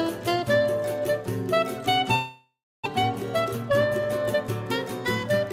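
At 2.15 s the sound breaks into a fading buzz, then near silence until 2.88 s. This is likely a long network dropout; about 0.6 s never returns. From 3.03 s to 4.44 s, a jitter buffer speed-up trims short pitch-period pieces. Playback runs 105% fast, same pitch, losing about a tenth of a second.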